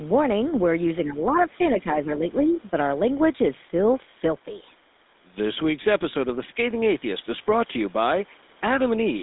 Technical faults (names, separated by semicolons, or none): GSM full-rate codec; speech suppressed in double talk; other side's voice leaking through